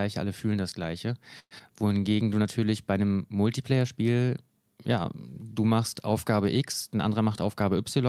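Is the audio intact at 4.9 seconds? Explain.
Yes, the audio is intact at 4.9 seconds, with no audible fault at that point.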